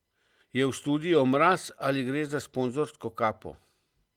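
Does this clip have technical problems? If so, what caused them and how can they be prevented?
No, nothing in this speech clip points to a technical problem that needs fixing. The Opus voice compression can be heard only as light coding damage, with the band reaching up to about 20 kHz, which fits hybrid mode at a moderate rate of around 24 kbps.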